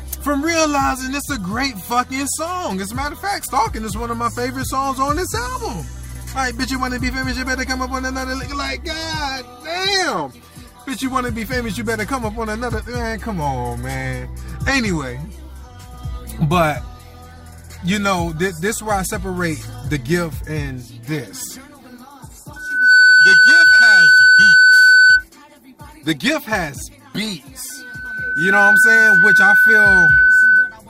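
At 22.56 s a loudspeaker feedback squeal kicks in: a steady 1.5 kHz tone swells up in under half a second and sits well over the audio, about 15 dB louder, until 25.24 s. The mic is hearing its own speaker, and at that frequency the loop gain tops one. It comes back at 27.69 s, creeping up over about a second and staying roughly 10 dB above, through 30.76 s.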